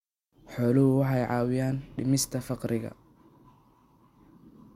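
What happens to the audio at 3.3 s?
Nothing goes wrong at 3.3 s; the speech carries on cleanly there with no dropout, click, distortion or other fault.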